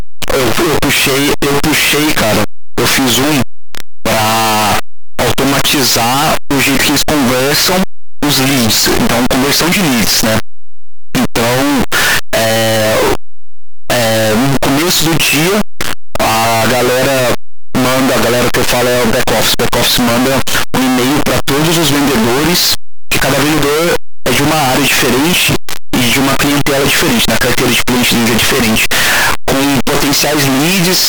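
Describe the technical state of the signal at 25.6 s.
At 25.6 s the speech is buried in loud, harsh distortion, and it's like that through the whole clip, quiet stretches blaring as hard as the rest. The likely cause is signed and unsigned mixed up on the 8-bit samples: the top bit flips, so every zero crossing lurches across the full range.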